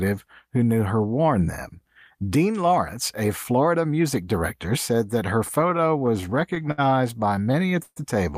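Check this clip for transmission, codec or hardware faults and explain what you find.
There are repeated stalls (stutter) in two places. From 5.61 to 6.80 s, after "director said that her", a dozen brief holds appear, the longest 67 ms. From 7.36 to 7.98 s, six holds appear, one lasting 131 ms. Packets arrived late and the jitter buffer ran dry. The receiver stretched the last sound and faded it during the longer wait. Nothing is lost, but the speech drags and stutters.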